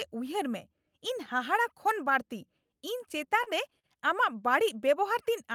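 Repeated stalls (stutter) occur between 3.17 and 3.86 s, where the jitter buffer ran dry four times as packets arrived late. Each gap, the longest 43 ms, was bridged by extending the preceding sound, about 90 ms in total, so nothing is lost but the speech drags and stutters.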